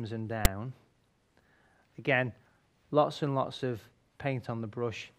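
File tags played as audio at 0.45 s: a very brief, hard-edged burst of loud rasping static cuts into the sound. A block of text metadata has been read by the player as though it were audio samples, so the character bytes become a harsh, buzzy waveform sitting off-centre rather than around zero. The burst lasts only a few milliseconds and starts and stops abruptly, marking exactly where the tag data was misread as sound.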